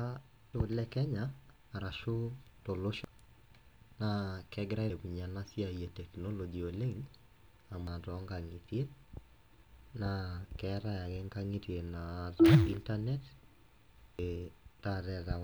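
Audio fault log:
0.54 s, 3.04 s, 4.90 s, 7.87 s and 14.19 s: damaged data in a compressed stream. Five brief, isolated glitches break into the speech, each a momentary chirp or blip. At these points the compressed bitstream carries wrong bytes, so the decoder misreads the affected frame, drops out of sync and has to hunt for the next valid frame header before playback carries on cleanly. That misdecoded instant is what cuts through the speech as a short artificial squawk.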